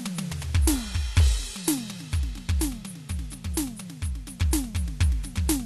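Two free-running clocks likely drift about 70 ppm apart, slipping one sample roughly every third of a second, giving faint regular clock slip clicks through the music from 0.28 to 5.55 s.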